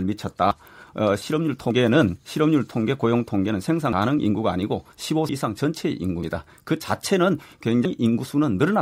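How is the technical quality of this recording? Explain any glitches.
The recording's let down by repeated skips. At 0.51, 1.71, 3.93, 5.29, 6.23 and 7.85 s the speech jumps forward, losing about a tenth of a second each time. That's likely a dropped buffer (overrun): samples weren't collected in time, so the hardware overwrote them and the surrounding audio got spliced straight together.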